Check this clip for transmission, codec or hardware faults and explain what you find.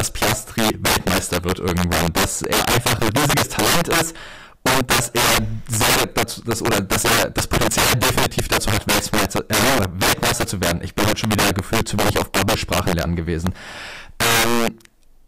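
One fault runs through the whole speech clip: integer overflow. The signal is pushed about 12 dB past full scale, and instead of being limited, roughly 7 percent of samples wrap to the opposite sign. Every loud syllable produces violent cracks, much harsher than clipping. On a waveform, peaks jump abruptly from top to bottom rail; a spectrogram shows bright full-band vertical streaks on each loud sound.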